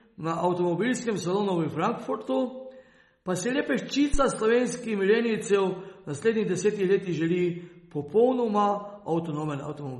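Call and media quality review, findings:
Watery, swirly texture across the whole clip, sibilants smeared into metallic chirps, nothing above about 11.7 kHz. Probable component: lossy encoder, likely MP3 compression at a bitrate near 32 kbps. Spectrogram: hard horizontal ceiling at 11.7 kHz, speckled holes where weak bands drop in and out frame to frame. Waveform: transients softened, pre-echo smear ahead of onsets.

Phantom power thump, 4.14–4.25 s: deep low-frequency bump, dying away over about 25 ms. Probable component: mic input supply switched while live, the step pushed through the coupling capacitors. Waveform: sharp one-sided offset with a quick exponential return to centre. Spectrogram: bright full-height smudge concentrated at the bottom, fading fast.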